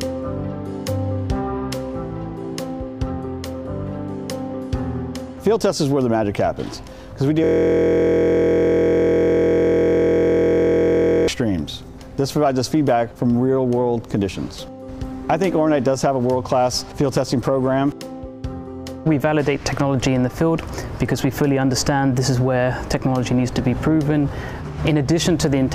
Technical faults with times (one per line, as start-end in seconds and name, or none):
7.44-11.28 system hang loop